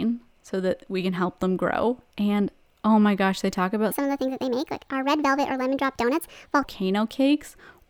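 A speech recording: right after "my gosh they talk", from 3.91 to 6.64 s, the audio turns hurried and high, a section at the wrong speed running 1.44 times too fast and about seven semitones sharp, likely from being played against the wrong clock.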